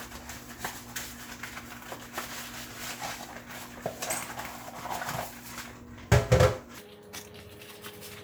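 From 6.78 s to 8.23 s, a section at the wrong speed plays 1.73 times too fast. Pitch jumps about ten semitones, hurried and thin, likely from a mismatched playback clock.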